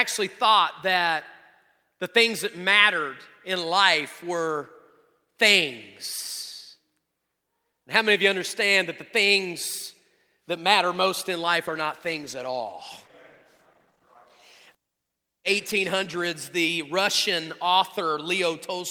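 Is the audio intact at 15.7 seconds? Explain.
No. From 11.67 to 16.29 s, just after "matter most in life", a call bitrate drop takes the encoder from 48 to 17 kbps, so speech turns coarse and muffled. Unlike packet loss, it stays continuous, with no gaps or glitches, until quality returns.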